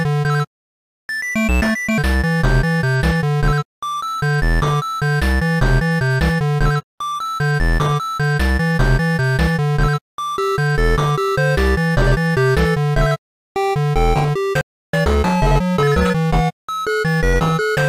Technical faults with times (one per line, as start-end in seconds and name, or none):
0.62-1.07 playback stall
1.07-1.98 catch-up at higher speed
14.61-14.93 playback stall
14.93-17.78 catch-up at higher speed